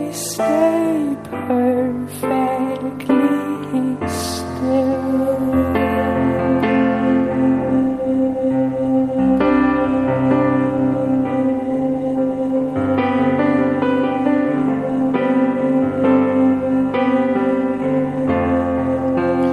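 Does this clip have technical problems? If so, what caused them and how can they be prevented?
No, this clip has no technical problems, so there is nothing to prevent.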